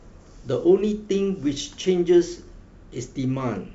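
No technical faults are audible in this speech.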